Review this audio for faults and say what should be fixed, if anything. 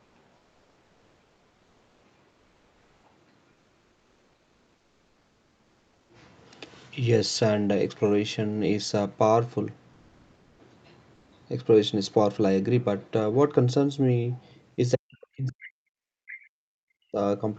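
Comfort noise in place of the background appears at 0.03 to 0.15 s, 9.93 to 10.59 s and 11.15 to 11.31 s. The real room tone gives way to smooth, featureless hiss about 1 to 2 dB quieter, most likely synthesised during discontinuous transmission (Opus DTX). On a spectrogram these gaps show as an even, textureless wash. Disabling DTX or sending richer noise updates would prevent it.

Speech is suppressed in double talk from 14.95 to 17.19 s. Across about 2 s the voice dips, thins and breaks up, falling by around 40 dB at its deepest, likely because the echo canceller muted the talker while the far side spoke. The waveform shows the envelope collapsing in chunks. A canceller with better double-talk detection would stop this.

The other side's voice leaks through from 16.28 to 16.49 s as a faint second voice roughly 20 dB below the talker, likely loudspeaker echo the canceller failed to remove. 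A spectrogram shows a weak, separate harmonic pattern there. Better echo cancellation or headphones would prevent it.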